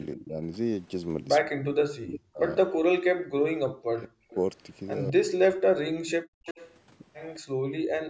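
At 0.16 to 0.38 s, then 1.44 to 4.26 s and 5.13 to 6.01 s, the speech dips by about 20 dB at first and later by up to about 40 dB. This is speech suppressed in double talk, likely from an echo canceller ducking the talker while the far side spoke. The waveform shows collapsed envelopes, and the spectrogram shows the speech bands weakening.

Echo leak appears at 2.14 s, 4.3 s, 6.45 to 6.76 s and 7.34 s. Each time a faint copy of the voice follows 211 ms behind, at about 15 to 30 dB below the speech. On a spectrogram this shows as weaker duplicated harmonic patterns offset in time.

At 6.29 to 6.45 s the room tone drops by about 40 dB for a moment and then returns. This is background gated by the echo canceller, which clamped the microphone while the loudspeaker played. The noise floor vanishes into a dark, silent notch.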